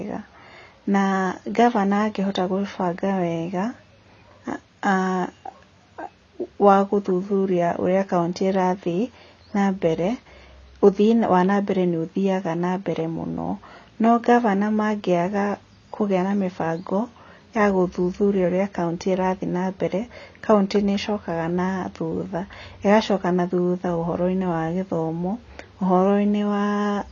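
AAC compression damage runs throughout this speech recording, from start to finish, and is plainly audible. Nothing is present above about 7.1 kHz, so the sound is dull, with sibilants smeared and a warbling, fizzy texture on sustained sounds. The likely cause is AAC-LC encoding at a low bitrate, consistent with roughly 24 kbps. Short of bits, the encoder lowers its cut-off and coarsely quantises or drops spectral bands.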